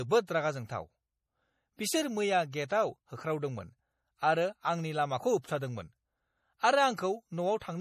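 Speech with MP3 compression damage plainly audible throughout, likely from encoding at a low bitrate, consistent with around 40 kbps. Nothing survives above 15 kHz, so a spectrogram shows a hard ceiling there, with weak high bands flickering in and out between frames, heard as watery, swirly sibilants.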